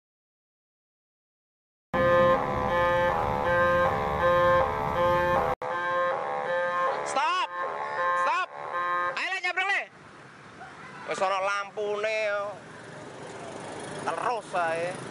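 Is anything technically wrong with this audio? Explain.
Yes. At 5.54 s the audio cuts out for about 80 ms, then resumes with a different character that lasts to the end of the clip. After the gap, nothing is present above about 10.5 kHz, the level drops by a few decibels, and a new background noise floor sits roughly 45 dB below the signal. This is likely an input switched to a poorer device, a capture path with a narrower band and its own noise. It makes everything after the switch sound duller and slightly quieter than what came before.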